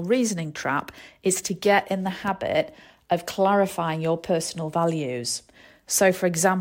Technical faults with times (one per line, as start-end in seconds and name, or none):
none